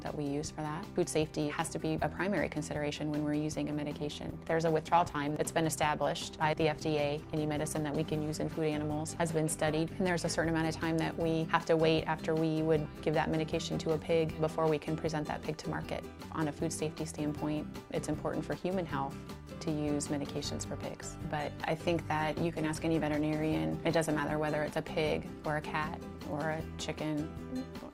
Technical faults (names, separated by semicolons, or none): call bitrate drop